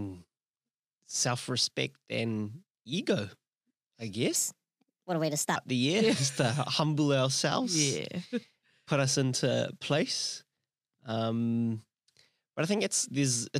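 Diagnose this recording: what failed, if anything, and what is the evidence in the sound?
From 4.36 s to 5.56 s, just before "the year is", the speech runs 1.28 times too fast, with pitch raised about four semitones and the voice sounding higher and hurried, then snapping back to normal speed. This is a section at the wrong speed, likely from an editing or playback stage resampling that stretch against the wrong clock. On a spectrogram, harmonics and formants jump upward by the same ratio across that span, and waveform cycles appear compressed in time.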